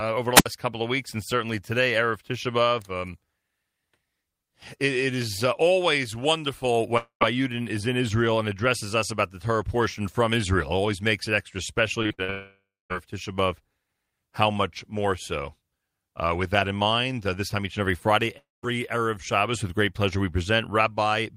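At 0.35 s, the radio link of an analogue wireless microphone weakens until the receiver's squelch closes, a wireless microphone squelch dropout. Hiss swells briefly, then the output is muted for about 70 ms, leaving a hole of near silence before the speech returns at 0.46 s, the whole event lasting roughly a tenth of a second.

From 6.97 to 7.23 s, audio likely stopped arriving over the network for about 240 ms, a long network dropout. The receiver stretches the last sound into a fading buzz for around 0.23 s, with the final 110 ms or so falling to silence. Speech resumes with that stretch simply gone.

Between 12.03 and 12.30 s, packets are lost or late again and again, the repeated packet loss that gives speech a robotic sound. Four short holes, the longest about 59 ms and together about 160 ms, are each patched by looping what came just before. More than half of this stretch is concealed, so the speech turns choppy.

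That stretch runs straight into a second long network dropout, from 12.30 to 12.92 s, where the connection likely went silent for about 600 ms. A smeared continuation of the last sound decays over roughly 0.6 s, and the last quarter-second of it is plain silence before speech picks up again further on.

The third long network dropout falls at 18.38 to 18.65 s and was likely caused by another interruption of arriving audio, about 260 ms lost. A brief buzzy tail fades out, around 180 ms of that is silent, and the sound returns without the missing portion.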